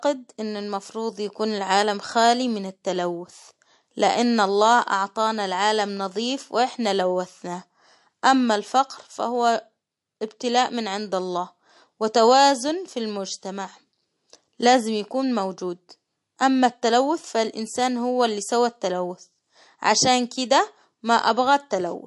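Throughout, the speech loses all treble above 11.3 kHz and sounds plainly watery, the mark of MP3 compression at what is likely a low bitrate near 48 kbps.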